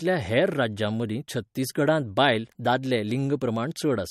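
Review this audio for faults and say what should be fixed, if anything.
Throughout the clip, the speech has likely passed through MP3 compression with too few bits for the encoder's hearing model to cover the whole spectrum. The encoder has removed everything above 15.9 kHz and discarded weaker frequency lines that switch on and off from frame to frame. This gives the speech a plainly audible watery, swirling quality. The degree of damage fits a bitrate around 48 kbps. To prevent it, keep a lossless master and encode any MP3 copy at a much higher bitrate.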